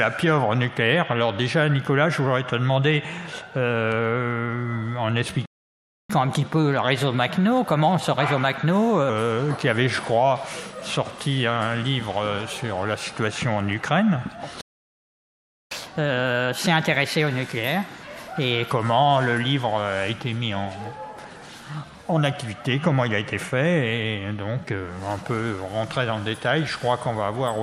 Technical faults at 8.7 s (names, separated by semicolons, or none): catch-up at higher speed